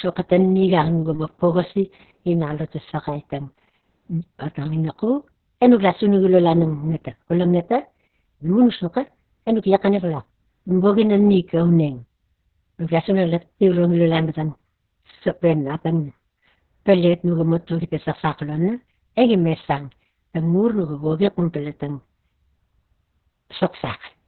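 Opus voice compression throughout: speech is cut off above 4.3 kHz and sounds muffled, hoarse and robotic, consistent with narrowband SILK coding at roughly 6 kbps.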